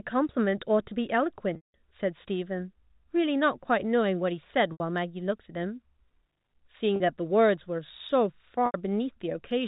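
A held, buzzy sustain replaces the speech four times. At 1.56 s, 180 ms of speech drops out, so the buzz fades to silence before the speech cross-fades back in. Shorter gaps follow at 4.72 s and 8.66 s (80 ms each) and at 6.96 s (40 ms). This is packet loss with pitch repetition: the receiver bridges each lost stretch, whose length fits 20 ms packets, by looping the last pitch period and fading it out. The band-limited telephone sound of the G.711 coding stays steady throughout.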